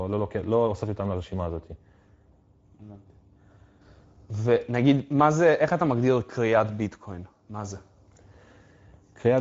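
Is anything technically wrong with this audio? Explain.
Yes. Speex codec damage is plainly audible throughout this speech. The sound fits a bitrate near 17 kbps, where the CELP encoder has too few bits to model the excitation, leaving speech noisy and hoarse, with nothing above 7.7 kHz.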